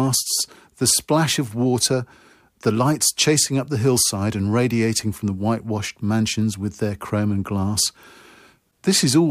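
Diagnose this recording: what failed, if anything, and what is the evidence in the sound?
Nothing failed; no stage in the chain shows trouble.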